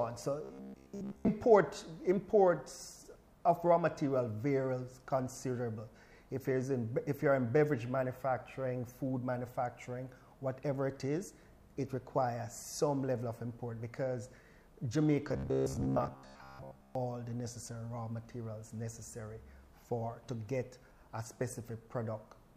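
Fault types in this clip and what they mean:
Robotic sound from repeated short buffers: From 0.44 to 1.31 s and again from 15.29 to 16.95 s, the sound turns into a rigid, metallic buzz fixed at about 66.7 Hz. That pitch corresponds to a loop of roughly 15 ms being replayed, most likely because new audio arrived too seldom and the last short block was repeated to fill the gaps. Most of the sound in those stretches is skipped. Plain dropouts leave silence or clicks, but this fault leaves a steady, pitched drone.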